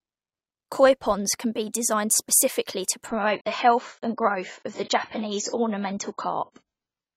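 At 3.08 s, right after "be designed specifically to", the stream drops to a lower bitrate and stays there to the end. Treble vanishes above 7.6 kHz and artefacts thicken, consistent with AAC falling from about 96 to 16 kbit/s. The switch is abrupt, with no gap.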